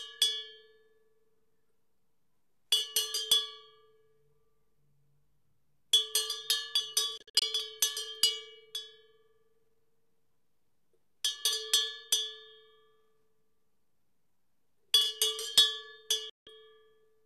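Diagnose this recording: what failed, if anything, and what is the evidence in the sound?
A digital broadcast dropout at the reception stage: the sound mutes in several short holes (longest 48 ms) between 7.18 and 7.42 s, then for 168 ms at 16.30 to 16.47 s, each with a 3 ms fade. The receiver silenced failed frames; unlike network concealment, nothing is smeared or repeated.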